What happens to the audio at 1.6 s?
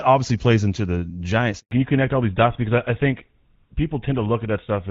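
Right at that point there's a handover gap. From about 1.59 s to 1.71 s the speech just drops out for roughly 120 ms. It fades within a few tens of milliseconds and then goes silent. That's the call being passed from one network to another, with no speech frames getting through during the switch, so anything said in that window is simply gone. On either side the wideband HD Voice audio sounds clear, as you'd expect from AMR-WB at a decent rate.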